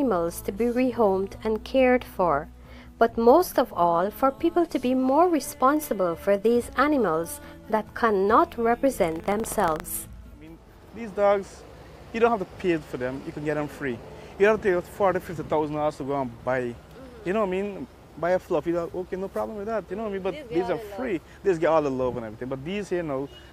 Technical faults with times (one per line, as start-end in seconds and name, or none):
9.00-9.83 buffer tearing